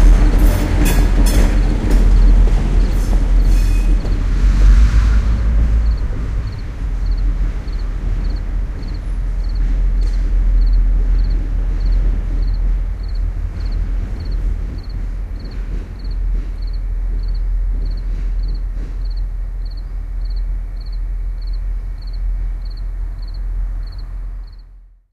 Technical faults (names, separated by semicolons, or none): hard clipping